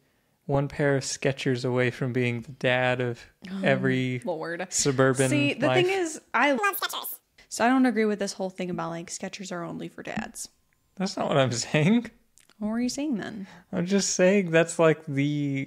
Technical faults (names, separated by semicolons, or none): audio read two samples at a time (double speed)